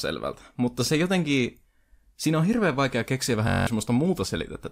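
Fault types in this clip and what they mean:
System hang loop: the driver stalled while the hardware replayed one 21.33 ms chunk, which fits a 1024-sample buffer, nine times from 3.48 to 3.67 s. It is a 46.9 Hz buzz, a waveform of identical repeated cycles, and evenly spaced horizontal harmonic lines on a spectrogram.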